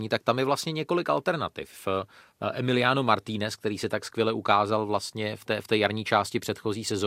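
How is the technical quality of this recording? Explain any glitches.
There's one glitch here, a short DAB burbling blip at about 2.74 s in the speech. It sounds like a brief blip of noise in the speech. What's happening is that weak DAB reception let bit errors slip past the error correction into the MP2 data, at a rough error rate of around a fifth of a percent. Corrupted samples put short blips of noise into single sub-bands, and corrupted scale factors make individual sub-bands jump in level for up to a frame, which gives that blip.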